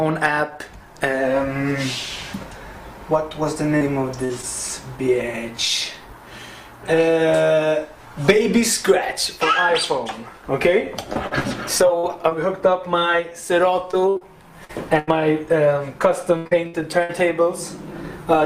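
Short concealed packet loss at 3.77–3.83, 4.41–4.45 and 12.99–13.03 s: a few hundredths of a second never arrived, and the receiver extended the preceding sound, leaving brief smears or wobbles. A burst of packet loss at 4.25–4.31 s drops about 40 ms in a row; the gap is bridged by a fading continuation of the last sound, and playback resumes slightly further on. Repeated packet loss, producing a robotic sound, affects 11.13–12.33 s (six gaps, up to 51 ms), 13.91–15.09 s (five gaps, up to 82 ms) and 16.37–17.11 s (four gaps, up to 79 ms, about a third of that span patched). Each gap is filled before the next one arrives, which makes these stretches choppy, with fragments of the audio missing.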